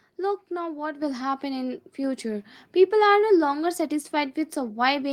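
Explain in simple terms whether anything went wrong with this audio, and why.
Microphone volume stepped up at 1.02 s: the call software judged the microphone too quiet and raised its input level at once, so everything suddenly gets louder.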